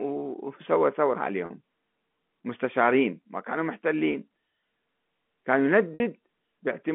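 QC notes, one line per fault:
1.46–1.50 s, 4.12–4.14 s and 5.94–6.00 s: packet loss with pitch repetition. Gaps of 40 ms, 20 ms and 60 ms fit two, one and three 20 ms packets lost. The receiver fills each gap by repeating the last pitch period. The 20 ms and 40 ms gaps sound like a brief held, buzzy tone. The 60 ms gap outlasts the roughly 50 ms fade, so the repeat thins out before the sound returns through a short cross-fade.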